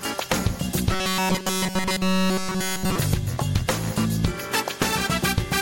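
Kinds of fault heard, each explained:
Robotic sound from repeated short buffers: a rigid metallic buzz at 188 Hz overrides the sound, likely from looping a buffer of about 5.3 ms while new audio is skipped.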